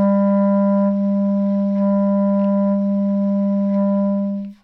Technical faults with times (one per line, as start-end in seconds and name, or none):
none